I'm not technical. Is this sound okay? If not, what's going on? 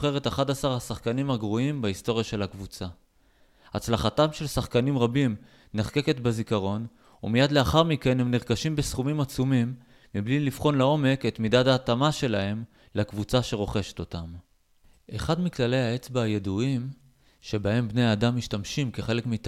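Yes, the sound is okay. Nothing in this clip needs fixing.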